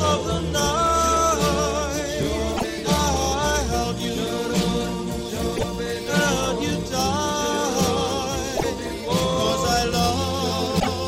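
Damaged data in a compressed stream shows up as four short bursts of about 0.11 s each, at 2.53–2.65 s, 5.53–5.65 s, 8.53–8.65 s and 10.77–10.88 s, the first three spaced exactly 3 s apart. At each point, corrupted bytes leave the decoder unable to read the frames properly, so it loses sync and hunts for the next valid frame header. That produces a brief chirp or blip.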